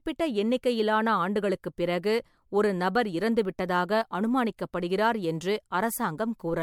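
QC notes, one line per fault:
throughout: generation loss. The speech sounds swirly, hollow and smeared, with blurred onsets and nothing above 19.9 kHz, worse than one MP3 pass near 96 kbit/s would give. The likely cause is about four re-encodes, each re-quantising on a shifted frame grid, so noise and spectral holes pile up.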